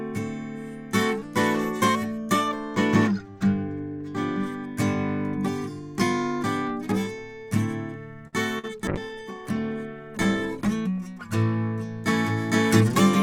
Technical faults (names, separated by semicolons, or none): channel delay (comb filtering); short stall from a late packet; short concealed packet loss; call bitrate drop